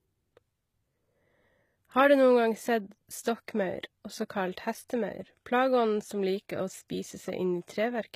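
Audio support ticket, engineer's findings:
Gritty, metallic treble on the speech, throughout. Sibilants lispy, plainly audible damage. Nothing above 14.9 kHz. Likely HE-AAC compression at a low bitrate, near 20 kbps. Upper band rebuilt by spectral band replication, so the copied harmonics misalign with the coded lows.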